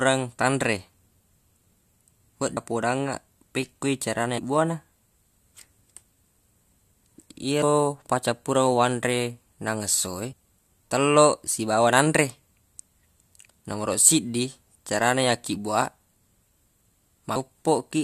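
At 2.56 s, 4.37 to 4.39 s, 7.62 s, 10.31 to 10.33 s and 17.35 s the speech is hit by damaged data in the compressed stream. Each time, corrupted bytes make the decoder misread a frame and resynchronise, so it produces a short squawk or blip of roughly 15 to 20 ms.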